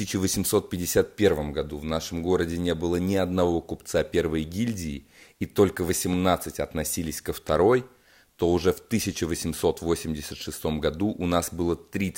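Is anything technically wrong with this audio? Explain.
Yes, there's one loud pop in the speech, from 6.13 to 6.17 s, about 10 dB above it. It's likely a voltage spike, like a plug or switch transient, landing as a sharp thump while the speech keeps going.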